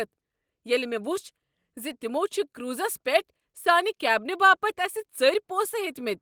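No technical faults are audible.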